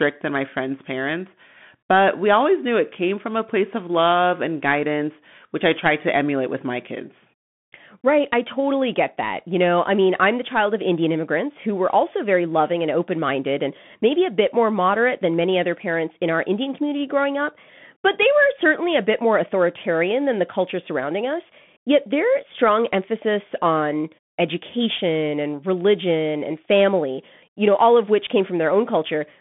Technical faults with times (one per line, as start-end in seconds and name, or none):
0.00-29.41 Bluetooth CVSD headset codec